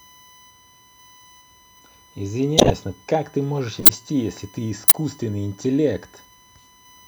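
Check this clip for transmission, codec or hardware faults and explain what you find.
Two faults are audible in this speech: a steady USB whine and three corrupt-frame events.

USB whine runs throughout: a fixed 1 kHz tone, about 25 dB below the speech, from the bus's 1 ms frame current leaking into the supply or ground. On a spectrogram it is a thin horizontal line.

Corrupt frame decoded at 2.58–2.71 s, 3.80–3.89 s and 4.88–4.95 s: the decoder played damaged frames, scattering energy across a few frames' length. Each is a brief chirp, squeak, blip or burst of noise and shows as a short smear of misplaced energy.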